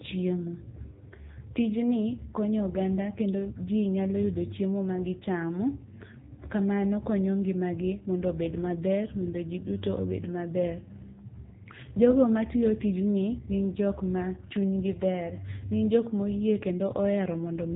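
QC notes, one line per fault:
throughout, AMR narrowband mobile codec: the speech is band-limited with nothing above 3.8 kHz, and the heavy coding damage leaves it buzzy and synthetic. The low bitrate, which fits AMR-NB at 6.7 kbps, forces a vocal-tract model driven by sparse pulses per frame, so natural detail is replaced.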